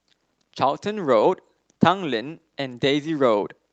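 No technical faults are audible in this speech.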